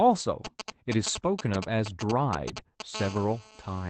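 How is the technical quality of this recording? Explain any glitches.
The recording is marred by radio interference from a nearby 2G phone, first intermittent and then continuous, heard over speech that tops out around 8 kHz.

From 0.45 to 2.82 s, GSM signalling bursts rectified by the audio circuit produce galloping ticks and short 217 Hz buzzes, nearly as loud as the speech. They show as clustered vertical stripes on a spectrogram.

From 2.95 to 3.90 s, a steady GSM phone buzz appears, a raspy 217 Hz tone with many harmonics at about 17 dB below the speech. It forms evenly spaced horizontal lines on a spectrogram.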